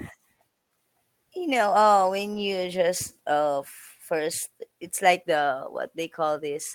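At 1.53 to 1.55 s, 2.33 to 2.39 s and 4.19 s, lost packets were rebuilt from error correction. Low-bitrate copies filled the gaps, so these moments sound briefly rougher and noisier.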